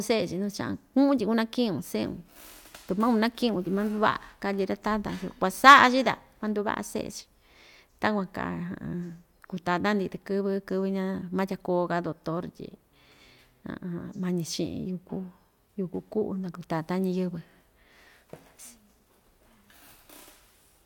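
No technical faults are audible in the speech.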